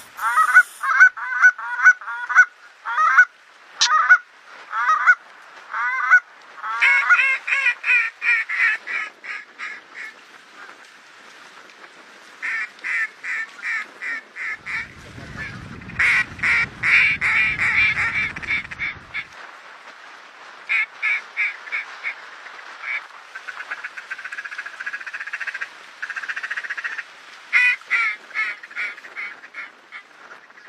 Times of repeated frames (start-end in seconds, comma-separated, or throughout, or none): none